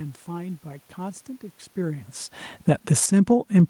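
From 2.6 s to the end at 3.70 s there is automatic gain falling: the gain control judged the input too loud and pulled its level down gradually, so the speech and the room noise sink together. That shared drop separates it from the talker movement around 1.5 s, where only the voice level shifted and the background stayed put.

From 3.18 s to 3.69 s, overlapping that fall, comes automatic gain rising of about 6 dB: the control decided the input had become too quiet and raised the gain again. The voice and the background swell together over about half a second, which marks it as a gain change rather than the talker moving closer.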